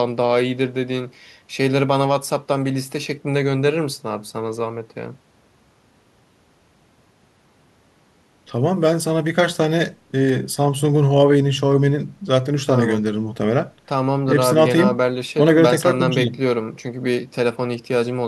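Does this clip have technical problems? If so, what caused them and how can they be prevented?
No, there are no technical problems to address here.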